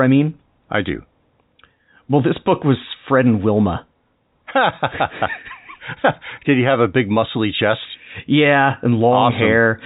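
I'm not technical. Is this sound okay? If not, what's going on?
Yes, the speech is in good technical shape: it has the ordinary narrow sound of G.711 telephone coding, the standard landline format that leaves out everything above 4 kHz, and nothing in it is going wrong.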